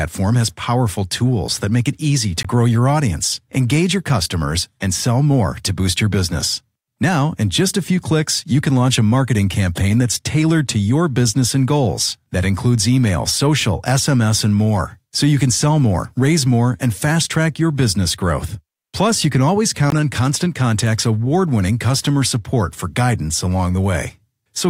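Speech with two brief Bluetooth stalls, at 2.43 s after "make it easy to" and 19.90 s after "you can always": dropouts of 17 and 19 ms, visible as thin blank vertical gaps in the spectrogram and flat lines in the waveform, likely from interference briefly draining the headphones' buffer.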